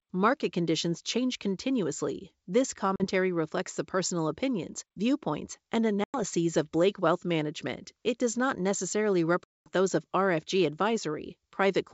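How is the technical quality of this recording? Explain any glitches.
Three short dropouts break up an otherwise clear wideband telephone sound that carries G.722's faint upper-band hiss.

Packet loss on an ADPCM call: hard-edged silent holes at 2.96 s (40 ms, before "reflects the personal opinions"), 6.04 s (100 ms, after "personal opinions viewpoints and") and 9.44 s (220 ms, between "does not necessarily" and "those of"). Each is followed by brief, slight distortion, because the decoder's predictor and step size lost sync with the sender's.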